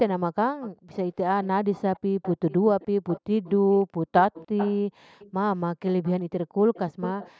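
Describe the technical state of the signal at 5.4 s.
Echo leak runs from 0.61 to 7.31 s: a faint copy trailing the speech by about 0.3 s, roughly 15 dB quieter, likely loudspeaker pickup an echo canceller missed.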